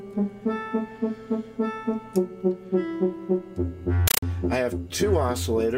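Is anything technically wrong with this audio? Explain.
Yes. From 4.08 to 4.23 s, a compressed stream is played as audio: undecoded Dolby Digital data becomes blasting static, 8 ms noise bursts chattering at 31.25 Hz. Unlike random digital noise, that steady frame rhythm betrays it.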